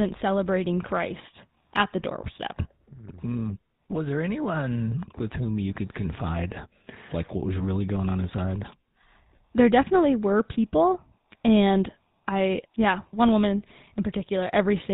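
Speech run through the GSM full-rate codec for its whole length, and the damage is plain to hear: a buzzy, gravelly roughness from the pulse-driven excitation, and nothing above 4 kHz. The texture points to the old 13 kbps mobile codec.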